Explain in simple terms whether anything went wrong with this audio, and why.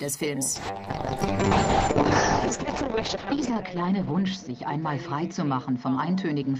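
Something does go wrong: from 0.56 s to the end there's a call bitrate drop. The connection got squeezed, so the encoder had far fewer bits, cutting the highs above 8 kHz and making the sound muffled and rough, worst for about 2.2 s.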